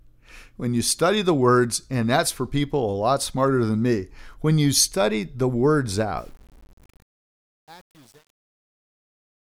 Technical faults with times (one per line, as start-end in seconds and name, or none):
6.18-9.54 truncation distortion on a fade